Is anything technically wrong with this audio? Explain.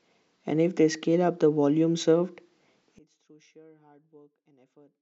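Yes. From 2.99 s to the end, the speech suffers an audio dropout to a faint residue. It cuts off abruptly, leaving only faint sound roughly 30 dB down, likely because the signal feed broke while the downstream path stayed live. A fade would taper, and a pause would come at a natural break in the speech.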